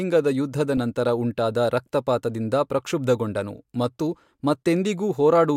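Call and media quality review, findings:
Short glitch at 0.77 s, error peaking near -15 dBFS, just before "ನಂತರ ಉಂಟಾದ ರಕ್ತಪಾತದಿಂದ ಪ್ರಕ್ಷುಬ್ಧಗೊಂಡನು". Corrupt frame decoded: bit errors in a single compressed frame, which the decoder played anyway, throwing energy into wrong frequency bands for that frame's duration. Check transport error detection and concealment.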